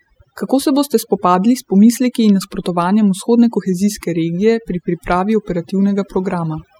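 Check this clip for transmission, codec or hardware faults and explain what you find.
One processing fault stands out, present throughout the speech: overdone noise removal. Aggressive suppression gates bands near the noise estimate, leaving twinkling specks in near-silent gaps, unlike codec warble.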